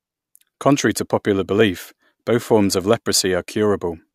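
At 1.61 s, after "to popular", and at 3.14 s, after "both forms of", a block of digital silence cuts in: the sound drops out for about 0.67 ms and 2 ms, likely since the output buffer went unfilled, leaving a hard-edged flat gap in the waveform, a thin full-height vertical line on a spectrogram, and an audible tick or dip.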